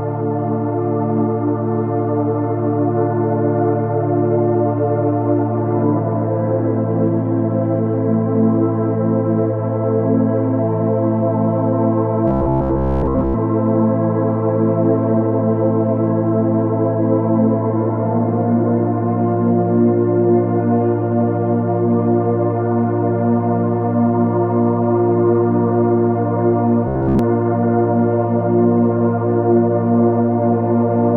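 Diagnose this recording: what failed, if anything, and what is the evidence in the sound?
Robotic sound from repeated short buffers at 12.28–13.36 s and 26.88–27.19 s: a rigid 66.7 Hz buzz, likely the buffer stage looping 15 ms chunks and skipping most real audio.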